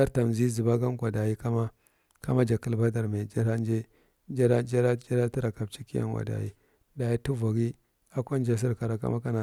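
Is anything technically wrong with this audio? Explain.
No, nothing technically wrong can be heard in this speech clip. Nothing in it points to a problem in how the audio was captured, processed or delivered.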